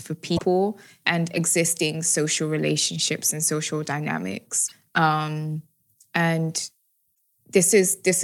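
Short glitches at 0.35–0.41, 4.65–4.72 and 7.12–7.14 s come from damaged data in a compressed stream: the decoder misreads corrupt frames and briefly loses sync.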